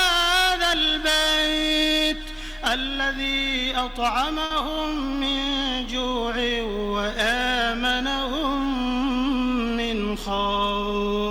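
At about 4.45 s there's a short stall from a late packet. A packet didn't turn up on time, the jitter buffer ran dry, and the receiver stretched the last bit of sound by 50 ms until it arrived. Nothing's lost, but that moment hangs a touch too long, with a faint buzzy dip.

From 9.59 to 10.57 s you get a jitter buffer speed-up. The buffer had built up extra delay, so the receiver kept snipping out tiny pitch-period slices, around 40 ms in total. The audio plays at about 104% speed with unchanged pitch.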